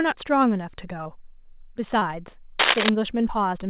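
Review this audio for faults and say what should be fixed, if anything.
There's short concealed packet loss twice, at 1.04 to 1.07 s and 1.99 to 2.03 s. Each time about 20 ms of the call arrived too late, and the receiver patched the hole by extending the preceding sound before blending back, so you hear a quick smear or wobble. A steadier network or a slightly deeper jitter buffer would stop those gaps.

From 2.59 to 2.89 s there's a rough burst of scratchy, rustling noise sitting a little above the speech level. That's most likely cable scratch noise, a worn cable or connector being moved so its contact jumps around. Swap or reseat the mic cable and keep it still while recording.

The band stopping at 4 kHz is just the narrowband call codec, which fits G.711 A-law.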